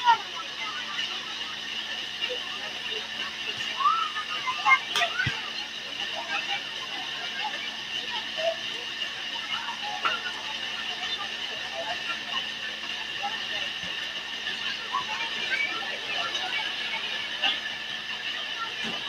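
From the start and all the way through, there's a noise suppressor applied to music or sounds that it wasn't built for. It's tuned for speech, so anything sustained, like held tones, ambience or reverb tails, gets read as noise and pulled down, here by roughly 5 dB or so. Sharp onsets slip past, then the level sags behind them, which gives the whole thing a pumping, fluttery feel and a thinned-out decay.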